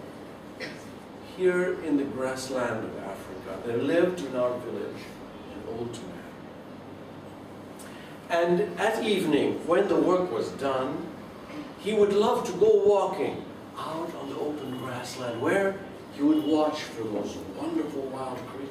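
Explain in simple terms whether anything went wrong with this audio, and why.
Nothing went wrong with this audio. There are no dropouts, glitches or other problems to point to anywhere in it.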